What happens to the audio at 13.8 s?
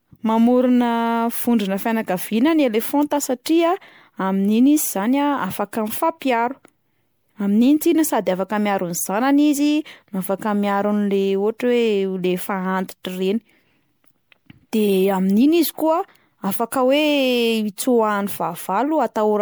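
Generation loss is present at 13.8 s, as it is throughout the speech: a swirly, smeared, hollow quality with blurred attacks, most likely from about ten rounds of MP3 encoding at 128 kbit/s, each requantising on a shifted frame grid so noise and spectral holes accumulate.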